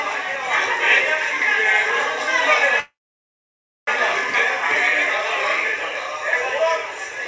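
Packets were likely held up, so the jitter buffer ran empty from 2.80 to 3.89 s, a call audio freeze. The last sound trails into a short fading buzz, then 0.96 s of silence, and the audio resumes where it stopped, nothing lost but 1.07 s late.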